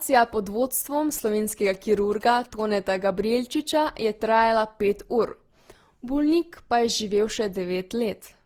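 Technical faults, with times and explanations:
Throughout, generation loss: the speech sounds swirly, smeared and hollow beyond what 48 kbit/s Opus alone would give, with blurred consonant onsets, likely from around seven successive lossy re-encodes. On a spectrogram, smeared time detail appears, with nothing above 20.5 kHz.
1.18–2.61 s, GSM signalling bursts: a galloping dit-dit-dit of short buzzes at about 217 Hz, roughly 25 dB below the speech, from a nearby 2G phone's radio bursts rectified in the audio circuit. A waveform shows clustered spiky bursts; a spectrogram shows vertical stripes with harmonics at 217 Hz spacing.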